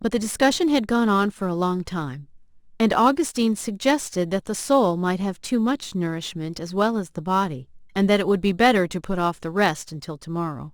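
From start to finish, a gritty, inharmonic fizz rides on the speech, growing with louder passages and clinging to sibilants and other bright sounds, sitting roughly 30 dB below the voice. This is crude rate conversion: the audio was taken from 48 kHz to 44.1 kHz by simply dropping samples and keeping the nearest one, with no filtering. The skipping repeats in a fixed cycle set by the two rates, producing distortion tones unrelated to the voice's pitch.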